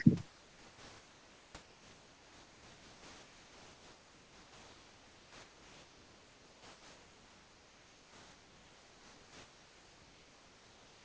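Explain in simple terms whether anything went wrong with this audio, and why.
Yes, the speech drops out twice, from 0.29 to 1.55 s and from 1.63 to 11.04 s. Steady, soft noise replaces it. This is likely sound dropped by the voice detector: the caller's end mistook speech for background and stopped sending it, so filler noise played instead.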